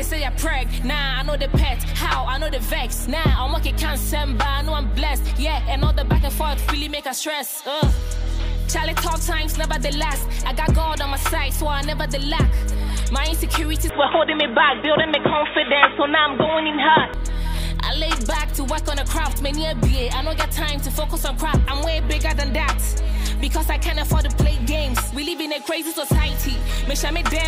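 At 13.89 s the sound abruptly narrows, with nothing above 3.8 kHz, and turns dull and boxy. A new, different background noise enters roughly 30 dB below the signal, while the overall level stays about the same and there is no gap at the transition. At 17.14 s the full bandwidth returns just as suddenly. This pattern points to an input switched to a poorer device, most likely a narrowband headset or secondary microphone taking over briefly.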